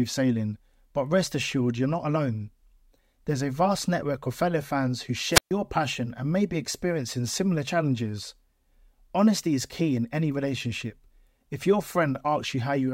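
At 5.31 s, just after "of fellow fans who", the speech cuts out in a wireless microphone squelch dropout lasting until 5.52 s: the FM radio signal fades, hiss rises briefly, then the receiver's squelch mutes the output for about 132 ms before speech resumes at "passion and may be".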